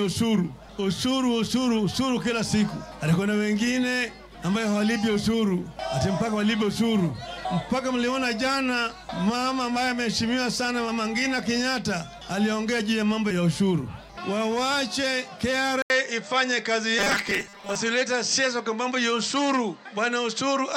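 At 15.82 s the input was likely switched to a poorer device: after a gap of 80 ms, the sound returns band-limited, and a new noise floor appears roughly 45 dB down. The level stays about the same, but the top end turns duller through to the end.

From 16.99 to 17.76 s there is robotic sound from repeated short buffers, likely caused by audio arriving too seldom, so each 5 ms chunk is replayed while about half the real signal is skipped. The repeats impose a rigid 200 Hz metallic buzz.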